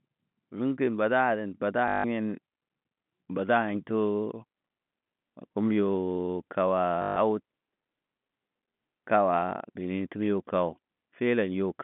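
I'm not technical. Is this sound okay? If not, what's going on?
No. There is packet loss with the last packet repeated, at 1.88 to 2.04 s and 7.02 to 7.16 s. Bits of the speech went missing, and the same tiny piece was replayed to fill the gap. That makes a brief robotic, buzzy stutter. The buzz fits 20 ms chunks. The telephone-style G.711 coding gives the narrow phone sound.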